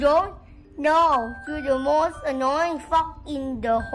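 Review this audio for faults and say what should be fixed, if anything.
Nothing stood out on listening, so there is nothing here that needs fixing.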